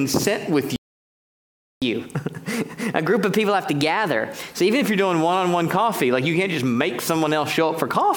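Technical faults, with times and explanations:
0.76–1.82 s, playback stall: The sound stops mid-flow and stays silent for about 1.06 s. Then it resumes. The player likely ran short of data, or its output thread was blocked. Nothing reached the output until it recovered.
1.82–4.82 s, catch-up at higher speed: Right after the gap, the sound plays 1.1 times faster. It also sits about a semitone and a half higher. The player is resampling its backlog to win back lost time. After three seconds, speed and pitch drop back to normal.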